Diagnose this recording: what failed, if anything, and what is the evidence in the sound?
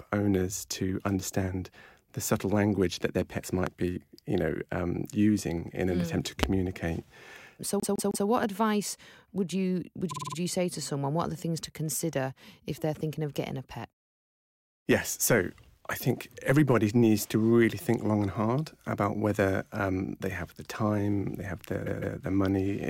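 Loud pop, 3.67–3.69 s after "language that their pets" and 6.43–6.46 s, peaking about 15 dB and about 25 dB above the signal: a voltage transient, likely from the analogue wiring.

Repeated frames at the codec or storage stage: a 157 ms block replays three extra times at 7.80–8.27 s before "what advice would you" and twice at 21.85–22.17 s after "have the time they"; a 52 ms block replays five extra times at 10.10–10.36 s. Each sounds as a stutter.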